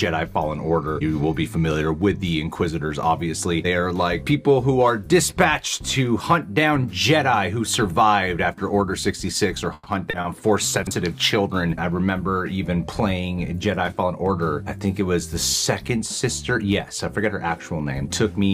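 At 9.73 s there is a call audio freeze, likely from packets held up in transit until the jitter buffer ran dry. The receiver carries the last sound on as a fading buzz for about 130 ms, including roughly 20 ms of silence, then resumes where it stopped, so nothing is lost and the delay grows by 130 ms.

Two short stalls from a late packet follow at 10.10 s and 10.21 s. Each time a packet missed its slot, the buffer emptied, and the receiver stretched the last sound by 30 ms until it arrived. Each stall sounds like a brief smear with a slight buzz or dip.

At 10.83 s a 40 ms chunk arrived one chunk late and plays after the audio that should follow it. This chunks-out-of-order fault creates three hard joins, heard as a jumbled moment through 10.91 s.

From 13.94 s to 14.43 s a jitter buffer speed-up trims backlog by cutting tiny pitch-period slices, about 50 ms in all. The audio runs at 109% speed with unchanged pitch and sounds hurried.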